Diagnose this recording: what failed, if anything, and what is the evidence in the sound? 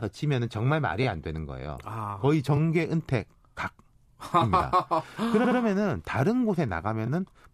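Repeated frames in the compressed stream, a codec or storage fault. Short stutters land at 1.02 s, 2.56 s and 7.06 s, each a single 23.2 ms block played twice, which fits a 1024-sample frame at 44.1 kHz. At 5.44 to 5.58 s a 69.7 ms block of three frames plays three times, adding 139.3 ms. A spectrogram shows identical patches side by side, and the waveform shows copied segments.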